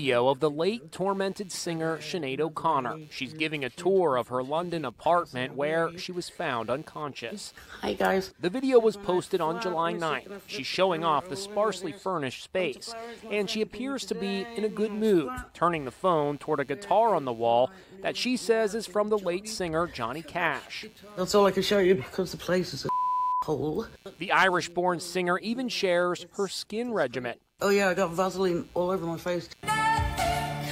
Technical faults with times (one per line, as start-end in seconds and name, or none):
0.00-30.71 computer activity noise